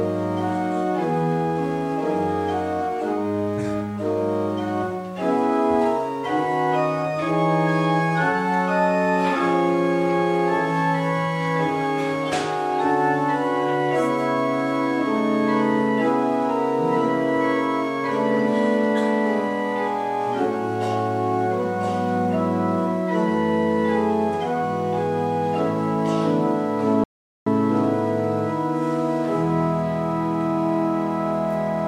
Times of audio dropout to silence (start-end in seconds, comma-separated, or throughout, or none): 27.04-27.46